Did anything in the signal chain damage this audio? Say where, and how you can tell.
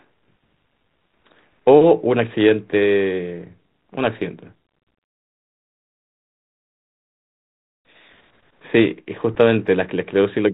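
No, nothing in the signal chain stood out as damaging this speech when I listened to it.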